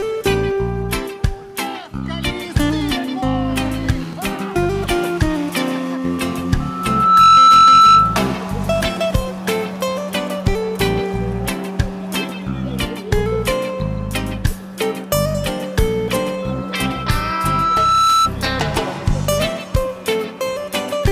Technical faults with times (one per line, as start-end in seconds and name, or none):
6.60-8.35 loudspeaker feedback squeal
16.42-18.32 loudspeaker feedback squeal